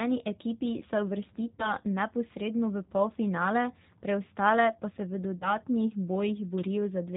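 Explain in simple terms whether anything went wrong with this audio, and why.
The whole recording went through the G.729 codec, a phone-call compressor that rebuilds speech from a simplified model of the voice. The damage is plainly audible. Everything above 4 kHz is gone, so the speech sounds muffled, slightly rough and synthetic.

There are also two VoIP packet loss events concealed by the speech codec. Around 1.55 to 1.73 s, just after "ekipi se", about 40 ms of audio went missing. Around 5.39 to 5.54 s, after "preostale pa se v", about 20 ms was lost. Each time, the decoder guessed the missing sound from what came just before. That leaves a brief buzzy or noisy, fading smear, and the speech stays weak for a moment afterwards.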